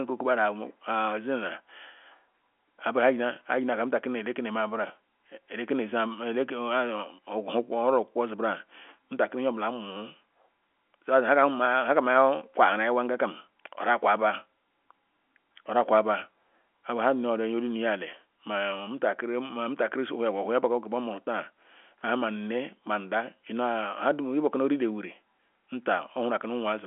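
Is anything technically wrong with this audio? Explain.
No, the speech sits within a normal telephone-line band of roughly 250 Hz to 3.4 kHz, consistent with ordinary G.711 telephone coding, and nothing in it points to a fault.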